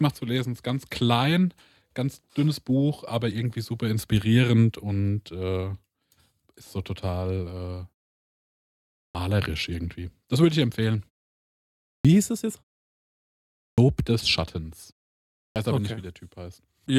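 At 9.03, 11.94, 13.66 and 15.44 s the speech returns with a clipped start after a pause: the output device, idle through 0.6 to 1.2 s of silence, wakes late and drops roughly 106 to 119 ms of onset. Each waveform jumps from flat straight into speech without a build-up.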